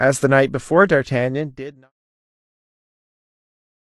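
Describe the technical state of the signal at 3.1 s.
At 3.1 s the signal is intact, with no fault present at that moment.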